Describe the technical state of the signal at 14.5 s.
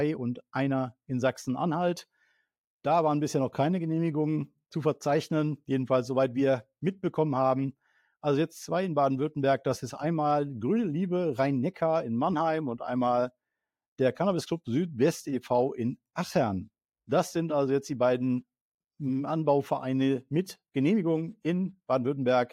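At 14.5 s the signal is intact, with no dropout, distortion, glitch or other fault to be heard at that point.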